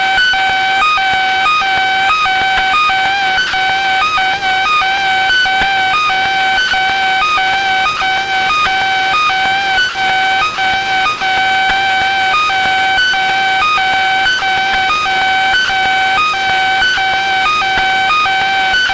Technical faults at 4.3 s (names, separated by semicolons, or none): none